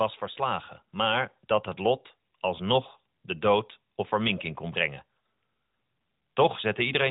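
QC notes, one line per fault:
0.36–1.40 s, automatic gain rising: the gain control lifts the level by about 3 dB just before "dat het lot alsnog", so the speech and the background swell together. On the waveform the envelope widens steadily, and on the spectrogram all bands brighten together.
6.20 s, lost AMR speech frame: one 20 ms frame fails, and the decoder repeats its last settings at falling gain, causing a brief dip through the narrowband speech. The waveform shows a short sag, and the spectrogram shows a thin smeared gap below 4 kHz.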